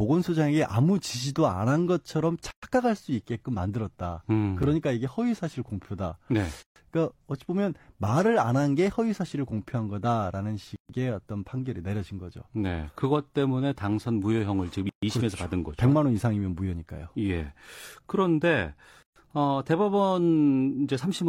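At 2.51 s the speech stops for about 120 ms, a gap at a join of encoded pieces. Separately encoded segments were joined with their encoder start delay and end padding still in place. The same hole recurs every 4 s, at 6.63, 10.76, 14.89 and 19.03 s, about 133 ms each. Its edges are softened by the codec, and the speech resumes where it left off.

At 4.63 s a 7 ms block of digital silence shows up as a tick or dip. A stretch of samples was zeroed, likely because the output buffer wasn't filled in time. Unlike the join gaps, it is very brief, cuts in and out with no fade and occurs only once.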